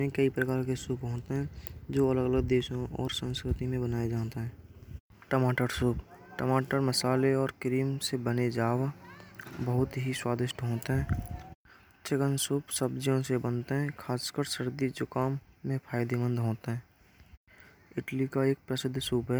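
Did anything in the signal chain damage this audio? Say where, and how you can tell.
No, nothing in the signal chain audibly damaged it.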